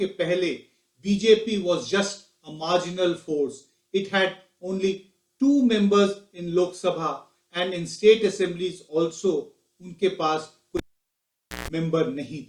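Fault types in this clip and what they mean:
Cable pulled and plugged in: a live lead comes out at 10.77 s with a pop, leaving near silence for 0.86 s, then a 0.15 s burst of 60 Hz mains buzz as only the tip makes contact, and another pop when sound returns at 11.68 s. The buzz sets it apart from a plain dropout.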